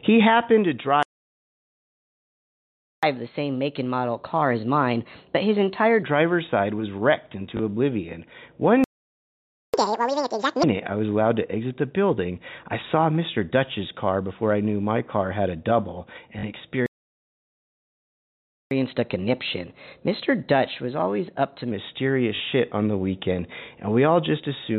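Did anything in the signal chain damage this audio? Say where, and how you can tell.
Yes. Playback stall at 1.03 to 3.03 s, just after "happened to", at 8.84 to 9.74 s and at 16.86 to 18.71 s: the sound simply stops for 2, 0.9 and 1.85 s, then resumes. This points to the playback buffer, likely an underrun or a blocked audio thread.

Catch-up at higher speed follows each stall, at 3.03 to 6.03 s, 9.74 to 10.63 s (just before "I was allowed to") and 18.71 to 21.71 s. The player resamples its backlog at 1.15, 2 and 1.1 times speed, so pitch jumps about two semitones, nearly an octave, then about a semitone and a half.

Packet loss with last packet repeated, a network-stage fault, appears at 7.57 to 7.59 s after "side was wrecked", then at 16.39 to 16.43 s and 22.36 to 22.40 s. Gaps of 20 and 40 ms, which fits one or two 20 ms packets, are filled by replaying the previous packet, producing a small blip and then brief buzzy stutters within the telephone-band G.711 sound.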